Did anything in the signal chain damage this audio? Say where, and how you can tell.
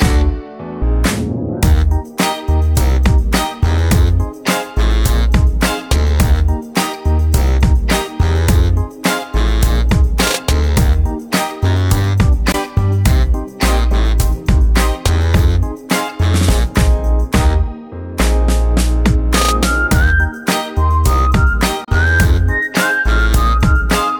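Yes. Two short holes, at 12.52 to 12.54 s and at 21.84 to 21.88 s, sit in the playback stage and are likely a Bluetooth dropout. The sound cuts to silence and then returns, roughly 15 ms and then 29 ms missing, which fits one and then two lost radio packets. The audio picks up further along rather than where it stopped. On a waveform each is a flat gap; on a spectrogram, a thin blank vertical stripe spanning all frequencies.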